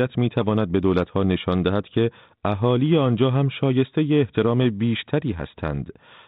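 No technical faults can be heard anywhere in the recording. The speech comes through a G.726 ADPCM path at 32 kbit/s, which holds it to the telephone band below 4 kHz and leaves only a light graininess that rises and falls with its level.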